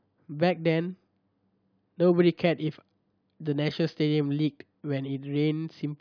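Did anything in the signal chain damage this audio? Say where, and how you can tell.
No, nothing in the signal chain audibly damaged this speech recording, as no stage from capture through playback has left a detectable mark on the signal.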